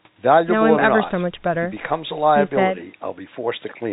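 Nothing goes wrong anywhere in this speech, which simply has the narrow, telephone-band sound of A-law G.711 coding, with nothing above 4 kHz.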